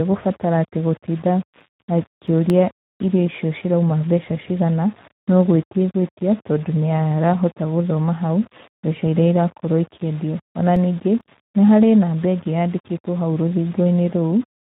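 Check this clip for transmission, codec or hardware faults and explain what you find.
Three faults are present in this speech: a coarse quantiser, plainly audible Speex coding, and two bursts of CD scratch ticks.

Low bit depth without dither runs throughout. The likely cause is a quantiser rounding to very few levels, about 6 bits, with no dither. The rounding error tracks the signal and sits only about 25 dB below it, so quiet passages turn gritty and grainy.

Speex codec damage is also present throughout. The low-rate CELP coding, consistent with roughly 11 kbps, leaves too few bits for the excitation, so the speech sounds hoarse and noisy. Nothing is heard above 3.8 kHz.

CD scratch ticks occur from 1.38 to 2.72 s. A blemish on the disc destroys more data than error correction can rebuild, once per revolution, and the player patches over it. The result is seven regular ticks, about five a second, each under 2 ms.

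CD scratch ticks return from 10.32 to 11.21 s, again from a scratch hit on each turn of the disc. Five ticks arrive slightly faster than in the first burst. The biggest is about twice as long as before, about 3 ms.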